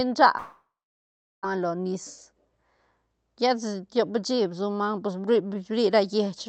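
Speech, carried over a call link whose Opus coding limits the band to about 8 kHz, cuts out from 0.37 s to 1.45 s in what sounds like a long network dropout, likely lost packets. The last sound is stretched into a fading buzz, and then about 0.74 s of near silence follows. Speech returns abruptly with roughly a second missing. A spectrogram shows smeared, repetitive horizontal bands that dim into an empty gap. On the waveform, the envelope decays to an almost flat line before the signal jumps back.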